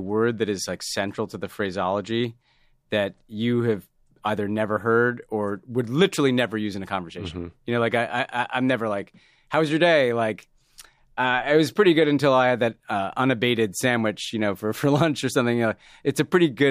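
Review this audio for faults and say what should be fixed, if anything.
No faults were found, so nothing needs fixing.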